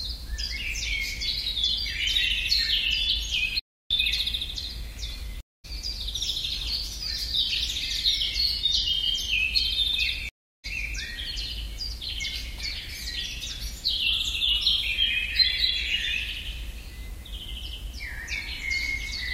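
A recording of sounds with two stream reconnects, at 5.41–5.65 s and 10.29–10.65 s, where silences of 233 ms and 348 ms end with the audio resuming about a fifth of a second further on.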